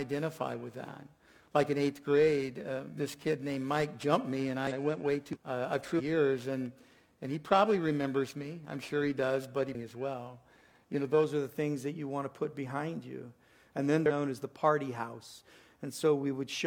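From the start until 11.24 s there is periodic clock jitter. Interference is modulating the converter's sample clock at a steady rate, around 2 kHz. Each component of the sound picks up a pair of sidebands, one above and one below, spaced by that rate. Higher frequencies are hit harder. The result is a rough, metallic edge riding on the sound. It disappears in any silent stretch.

Damaged data in a compressed stream then breaks through five times: 4.67–4.72 s, 5.31–5.37 s, 5.95–6.01 s, 9.71–9.76 s and 14.06–14.11 s. The first three are evenly spaced about 0.64 s apart. Corrupted bytes in the encoded stream cause the decoder to misread frames and lose sync. It then hunts for the next valid header. Each event lasts about 50 to 60 ms and is heard as a chirp, squawk, click or short hole.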